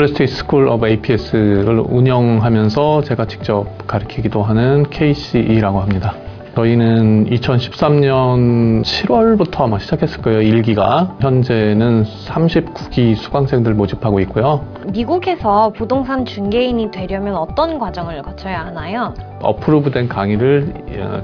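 No dropouts, glitches, distortion or level problems turn up anywhere in the audio.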